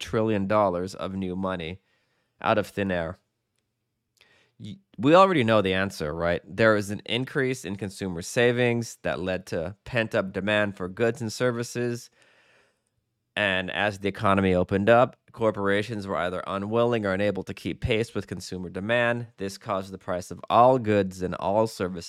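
Nothing is technically wrong with the speech in this clip.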